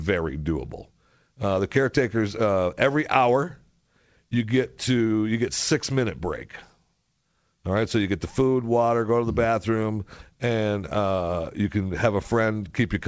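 Nothing stood out on listening to this speech, which comes through a call path whose content stops at 8 kHz, as fits a wideband call codec.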